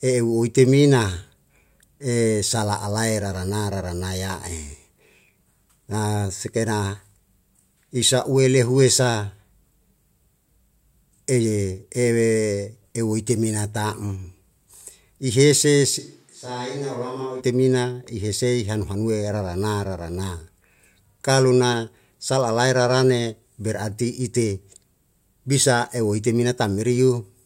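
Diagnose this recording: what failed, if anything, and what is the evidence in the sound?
From 16.0 to 17.4 s the speech turns abruptly hollow, roomy and about 10 dB quieter: likely a switch to a distant microphone at capture.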